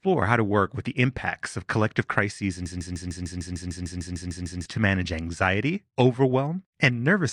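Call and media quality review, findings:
Broken-record loop, 2.66 to 4.66 s. A 150 ms fragment of speech repeats exactly, 13 times back to back. Likely a stalled player, encoder or stream replaying its last held fragment. The speech that belonged in those two seconds is lost, not delayed.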